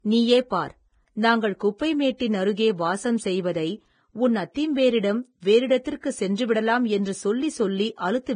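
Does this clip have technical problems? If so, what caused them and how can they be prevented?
Yes. Throughout the speech there is nothing above 9.7 kHz, and the dull texture points to low-bitrate audio saved at a high bitrate: a likely heavily compressed source, later re-encoded to a large MP3 that cannot restore the discarded content. Prevent it by encoding from the original uncompressed recording.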